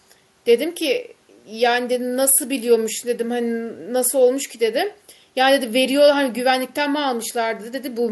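No technical faults are audible anywhere in the recording.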